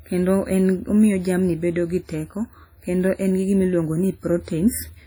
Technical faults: WMA compression

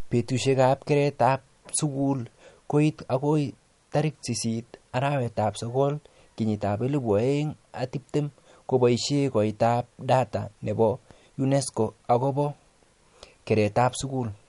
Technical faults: MP3 compression

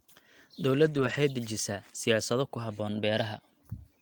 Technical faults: lost packet rebuilt from error correction

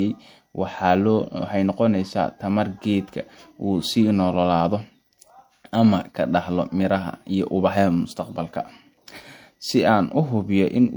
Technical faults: transcoding between lossy codecs

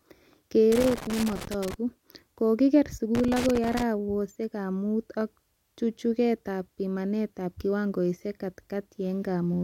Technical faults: loose connector crackle

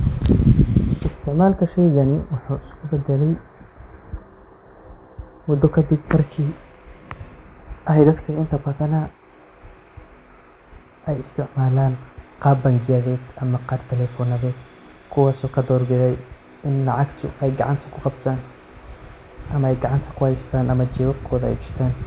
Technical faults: none

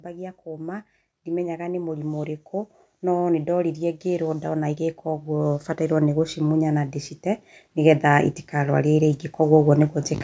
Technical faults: automatic gain rising

